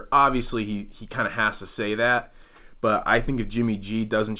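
No technical faults are audible.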